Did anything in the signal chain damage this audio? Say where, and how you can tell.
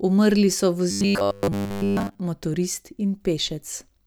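Yes. From 0.91 to 2.19 s the speech turns into robotic sound from repeated short buffers, a rigid metallic buzz at 100 Hz. Most of that stretch is repeated material. The likely cause is a starved driver buffer looping its last 10 ms.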